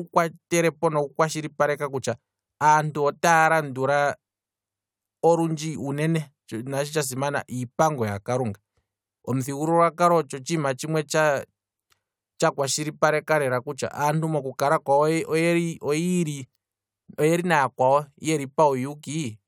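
Nothing goes wrong anywhere in this speech recording, so there's no technical fault to point to.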